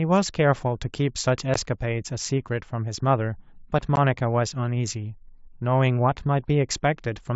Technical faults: unconcealed Bluetooth headset packet loss

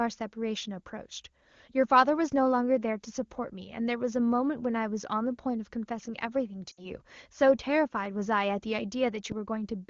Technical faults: lost AMR speech frames

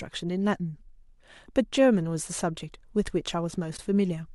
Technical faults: AAC frame loss with muting

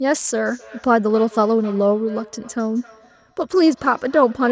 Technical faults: feedback echo between two devices

